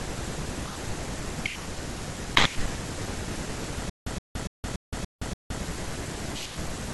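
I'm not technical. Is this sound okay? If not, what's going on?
No. From 3.90 to 5.62 s there is a stutter with silent gaps: a 0.12 s fragment of speech repeats six times, with 0.17 s of silence between repeats, likely from a stalled playback or stream.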